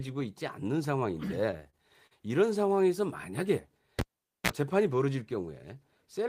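Repeated stalls (stutter) run from 1.51 to 2.13 s. Packets arrived late, so the jitter buffer emptied four times, the longest gap lasting 42 ms. The receiver stretched the last sound across 96 ms in all, so nothing is lost but the speech drags and hiccups.

A cable pulled and plugged in at 3.99 s brings a pop and about 460 ms of near silence, then a 32 ms burst of 60 Hz mains buzz as the connector tip touches, and a second pop when sound returns at 4.50 s.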